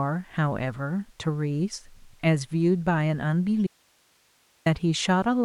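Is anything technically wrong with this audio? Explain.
Yes. From 3.67 to 4.66 s there's an audio dropout to a faint residue: the speech cuts off abruptly for about a second, leaving only hiss roughly 40 dB down. That's likely the signal feed breaking while the downstream path stayed live.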